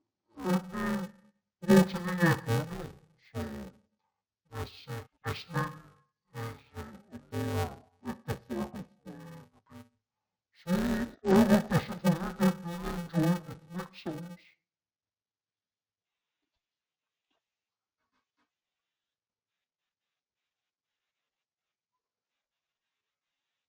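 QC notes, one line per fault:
Throughout, interleaved audio read as planar: each block of alternating left and right samples is split into two halves, one sent to each channel, so both play at half rate. The blocks are about 2.9 ms long, which fits a 128-sample block, too short for a clear octave drop. The speech sounds dull and robotic, with a buzz at about 345 Hz. A spectrogram shows a steady 345 Hz comb with harmonics, and the waveform shows a regular step pattern every 2.9 ms.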